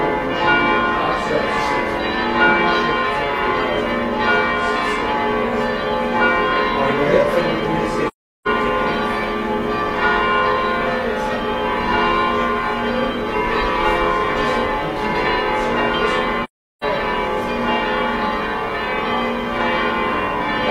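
The sound fades to silence at 8.08 s and again at 16.44 s, each gap lasting about 0.4 s with softened edges. This is AAC frame loss with muting. The decoder zeroed the missing spectrum, a hole that fits roughly nine lost frames.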